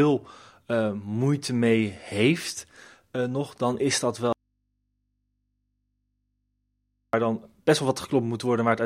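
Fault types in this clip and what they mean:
Audio dropout to a faint residue: after "nog dan is dat" the speech cuts to a low hum about 50 dB down for 2.81 s, likely a live path losing its signal.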